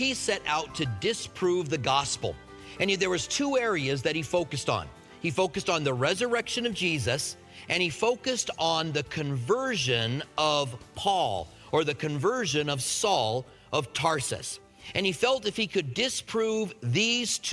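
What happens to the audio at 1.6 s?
Nothing goes wrong at 1.6 s; the audio plays through that moment intact, with no fault to be heard.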